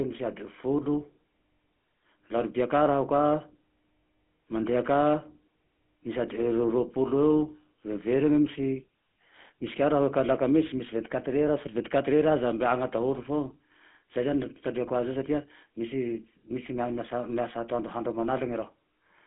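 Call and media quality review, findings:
Buzzy, gravelly roughness on the speech throughout the clip, with no content above 3.5 kHz and thin lows below 150 Hz. Probable component: GSM full-rate codec, consistent with 13 kbps. It models the vocal tract and rebuilds excitation from regularly spaced pulses.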